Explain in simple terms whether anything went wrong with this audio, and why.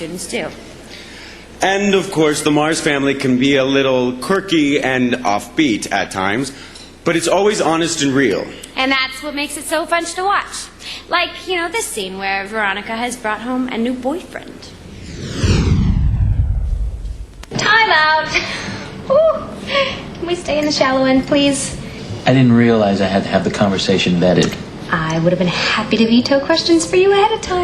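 Nothing went wrong with this audio, so there is no fault to explain.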